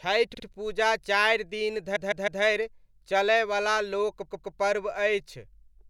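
Repeated frames make the speech stutter three times, replaying short chunks: about 52 ms at 0.33 s before "पूजा चारि दिन", 157 ms at 1.95 s after it, and 131 ms at 4.30 s.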